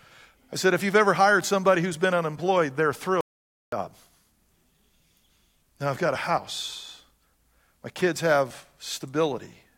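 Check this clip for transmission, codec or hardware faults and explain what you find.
One fault is present: an audio dropout to silence from 3.21 to 3.72 s, just after "who's been unemployed they're". The speech stops abruptly mid-flow and resumes just as abruptly about 0.52 s later. The gap is silent with no room tone or noise floor, so the input signal itself was lost while recording continued. The likely cause is a momentary disconnection, link failure or mute upstream of the recorder, which kept writing silence until the signal returned. The speech in that half-second is unrecoverable.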